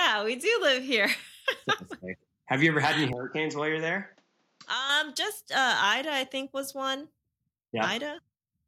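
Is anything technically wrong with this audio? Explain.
Yes. From 3.13 to 4.89 s the speech turns dull, with nothing above 7.6 kHz, drops about 5 dB and gains a new faint noise floor. This is likely an input switched to a poorer device. That new noise sets it apart from simple filtering.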